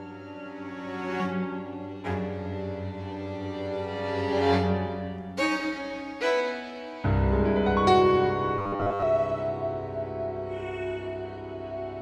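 From 8.58 to 9.02 s the audio turns into a rigid, metallic buzz at 100 Hz, robotic sound from repeated short buffers, with most of that stretch replaced by repeats. The cause is likely a starved stream looping a 10 ms buffer. Unlike a plain dropout, the gap is filled rather than silent.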